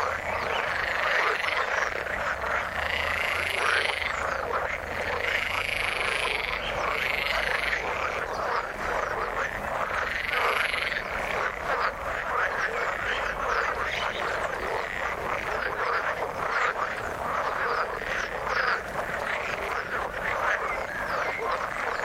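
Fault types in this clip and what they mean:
No technical faults can be heard in this audio.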